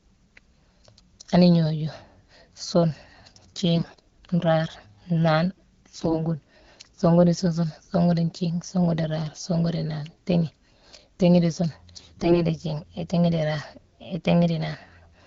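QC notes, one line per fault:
3.76–4.10 s, 5.91–6.24 s and 11.95–12.45 s: AMR bit errors. Around a tenth of the lightly protected bits flip, and nearer 15 percent in the last burst. Pitch and level roughly hold but the sound turns hoarse and gargly. This fits pulse and gain values decoding wrongly while the core checksum passes. A spectrogram shows smeared, noisy harmonics.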